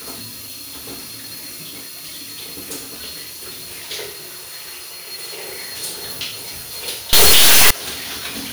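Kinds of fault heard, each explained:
Integer read as float: from 7.13 to 7.71 s the sound turns into an extremely loud, harsh buzzing square wave, snapping between silence and hard clipping. The 32-bit integer samples are being read as 32-bit float, so values land near zero or far beyond full scale.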